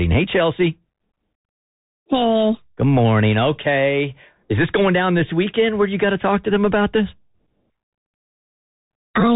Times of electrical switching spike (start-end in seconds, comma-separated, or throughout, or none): none